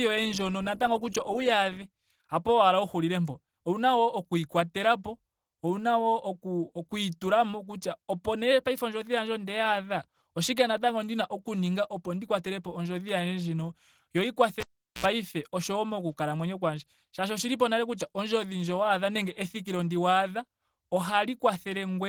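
Throughout, lossy encoding, likely Opus compression in its hybrid speech mode at a low rate near 16 kbps, leaves the speech plainly hoarse and muffled.

From 14.60 to 15.05 s, a cable pulled and plugged in breaks the signal: a pop, about 0.4 s of near silence, a 65 ms burst of 60 Hz mains buzz, then another pop.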